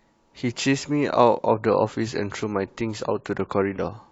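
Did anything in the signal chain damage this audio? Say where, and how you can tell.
Yes. An adaptive stream at a lower bitrate takes over at 1.48 s and runs to the end. With no gap, the quality abruptly drops, with added artefacts, as the player shifts to a lower-rate rendition of the speech. This sounds like a step from about 96 to 32 kbit/s AAC, triggered at the network stage.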